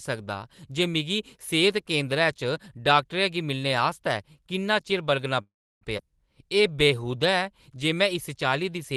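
At 5.41 s the speech halts in a call audio freeze lasting until 5.83 s. The last sound is carried on briefly as a fading buzz, then about 0.32 s of silence. Late packets likely emptied the jitter buffer. Unlike a skip, nothing is lost; the speech resumes exactly where it stopped.

From 5.97 to 6.00 s comes a skip ahead. Roughly 0.3 s of speech is simply gone, and the two sides are joined with only an 8 ms fill, so there is an abrupt jump rather than a pause. It is the opposite of the freeze: content missing, no gap added.

From 6.43 s to 8.96 s a jitter buffer slow-down stretches the speech. Single pitch periods and bits of pauses are repeated to rebuild the buffer's reserve, adding 176 ms and running at 93% speed. Pitch stays the same, but sounds are drawn out. Playback never stops, unlike the freeze.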